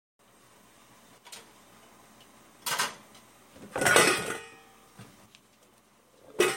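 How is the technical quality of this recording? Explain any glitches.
The recording has two level drops, most likely from one channel dropping out. When one side of the stereo signal goes silent, the mono sum keeps only half of what both channels shared, so the level falls abruptly by about 6 dB, and anything present only on the lost side vanishes. The first drop runs from 1.18 to 1.36 s. The second begins at 5.26 s and continues to the end. Both sound like the audio suddenly turning quieter.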